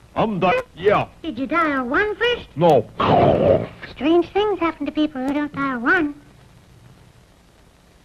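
The audio has a skip ahead at 0.51 to 0.53 s: roughly one and a half seconds is dropped with no fill, so playback jumps straight forward. Jitter buffer speed-up follows, from 0.65 to 3.15 s at 108% speed and from 3.96 to 7.72 s at 113%, trimming pitch-period pieces to shed backlog, about a fifth and then half a second, so the sound runs hurried at unchanged pitch.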